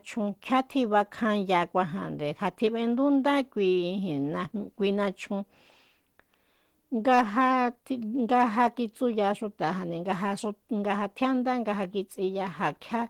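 It's a speech clip, and the whole thing carries plainly audible Opus compression damage. It sounds hoarse and grainy, with a muffled, papery quality where the detail should be crisp. Yet the top end still reaches about 20 kHz, so nothing's been lowpassed away. That mix of roughness over a full-width spectrum is most likely the encoder running in its hybrid speech mode at a low rate, which fits something around 16 kbps.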